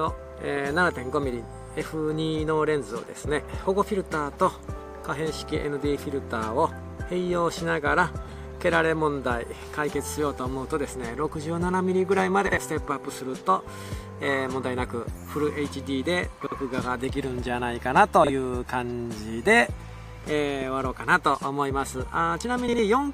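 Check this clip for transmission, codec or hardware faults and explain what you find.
The clip has one transmission fault, occurring four times. Frames out of order at 12.47–12.58 s, 16.41–16.52 s, 18.24–18.29 s and 22.68–22.79 s: two adjacent blocks of about 52 ms each (26 ms at 18.24 s, which points to single-frame blocks) were decoded in swapped order. Each stretch plays with its halves exchanged, giving a brief garbled flutter but no lost time.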